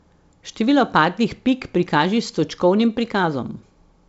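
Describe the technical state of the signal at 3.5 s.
At 3.5 s the speech is intact, with no fault at that moment, just the band-limited sound of the G.722 wideband telephone coding, which leaves nothing above about 7.7 kHz.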